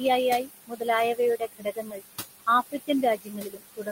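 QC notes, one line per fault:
Throughout: noise suppressor artifacts. The suppressor pulls bands it judges to be steady noise down by about 17 dB frame by frame, so the room noise, sitting about 10 dB below the speech, sinks in gaps and swells under speech. A spectrogram shows the noise floor flickering in patches.
0.67–0.86 s, 1.37–2.02 s and 3.17 s to the end: speech cut by the noise suppressor. Quiet stretches of speech were mistaken for noise and dropped by about 18 to 21 dB. In the second span roughly 400 ms is affected. The sound there is swallowed and faint. The waveform shows sudden dips in the envelope, and the spectrogram shows energy blanking out.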